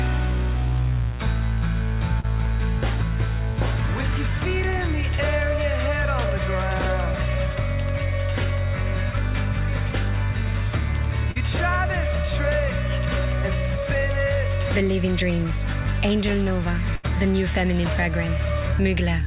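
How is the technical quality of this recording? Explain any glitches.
It's a narrowband call recording with three dropouts. Nothing above 4 kHz comes through, which fits a G.711 mu-law call path at 64 kbps, so the top end sounds dull.

There are two spots of short concealed packet loss, at 2.20 to 2.26 s and 11.31 to 11.38 s. Each time about 40 ms of audio didn't arrive in time, and the receiver patched in 32 ms and 42 ms by extending the last sound. You hear a quick smear or wobble there.

The burst of packet loss at 16.95 to 17.06 s is bigger, with about 80 ms gone. The receiver stretched the previous sound for 78 ms and faded it out, so you get a held buzz or fading hiss, then the audio picks up further on with that chunk missing.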